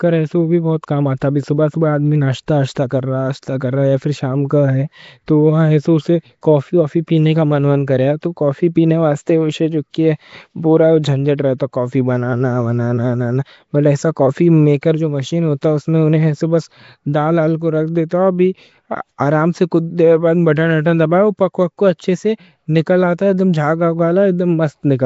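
Across the whole speech clip there is a rough, hissy halo and a smeared, underwater quality, with nothing above 7.7 kHz. This is likely Nellymoser compression at a rate that fits about 32 kbps. Its fixed-bit blocks starve weak bands, which are then filled with noise. Unlike the brief hiss described next, this damage never lets up.

Pre-echo appears at 2.75 s after "صبح صبح آدمی", at 14.81 s, at 15.61 s between "جو مشین" and "ہے اس", and at 18.09 s before "ہے ابھی". Each time, a burst of hiss 12 to 17 ms long runs just ahead of a sharp attack and softens it. Block-wide quantisation noise leaks backward into the quiet moment before the attack, rather than sounding as a click.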